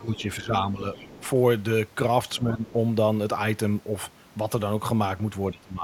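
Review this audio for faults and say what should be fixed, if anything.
Speech suppressed in double talk, at 0.00 to 0.23 s, 0.39 to 0.85 s, 2.38 to 2.68 s and 5.52 to 5.83 s: the speech dips by around 10 dB, and by around 20 dB in the final stretch. The likely cause is the echo canceller mistaking overlapping talk for loudspeaker echo and attenuating everything. A double-talk detector that keeps the near-end path open when both sides speak would prevent this.

Other side's voice leaking through, at 0.14 to 0.22 s and 0.94 to 1.27 s: a second voice sits faintly underneath, roughly 25 dB below the speech. This is likely residual loudspeaker echo that the canceller failed to subtract from the microphone signal. Better echo-path modelling, or headphones on the talker's end, would prevent it.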